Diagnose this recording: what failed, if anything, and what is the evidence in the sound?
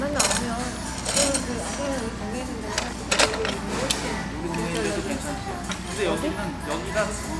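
Nothing failed in this recording of sounds. No stage in the chain, from wiring and conversion through to playback, leaves any audible trace of a fault.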